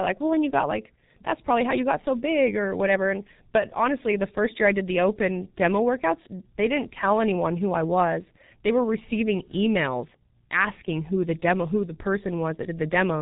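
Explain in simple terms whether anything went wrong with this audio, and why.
Something did go wrong: the speech was squeezed through the G.723.1 codec, an old internet-telephony format built to send voices over very slow connections. It chops the sound into short slices and rebuilds a rough model of the voice, and here it did so heavily. Everything above about 3.8 kHz is gone, so from start to finish the speech sounds muffled and hoarse, and consonants come out smeared and hard to tell apart.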